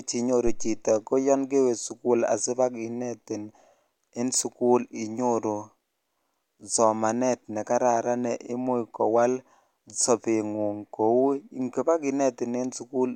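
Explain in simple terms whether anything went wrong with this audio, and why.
A phantom power thump, from 0.47 to 0.88 s before "ko yoon kewe sukul": switching microphone power made a deep thud, not a sharp click.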